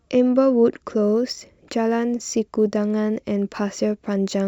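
From 1.04 s on, a converter clock wavering by microseconds causes sample clock jitter: hiss about 40 dB down, rising on loud, bright speech.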